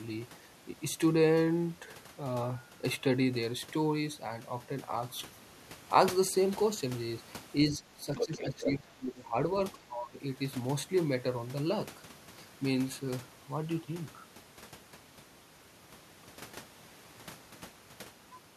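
From 7.7 to 9.35 s the talker gets pushed down, about 15 dB at worst, likely speech suppressed in double talk: both ends talking at once, so the echo canceller ducks everything. It happens again, briefly and harder, about 20 dB, from 9.87 to 10.19 s. In the middle of the first dip, 8.16 to 8.78 s, the other side's voice is leaking through, nearly as loud as the talker, likely loudspeaker echo the canceller didn't fully remove.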